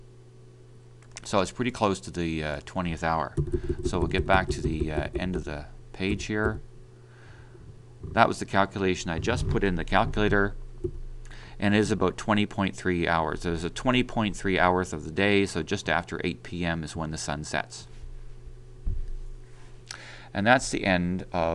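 No technical faults can be heard anywhere in the audio. Nothing in the signal breaks, drops out or changes character from the first moment to the last.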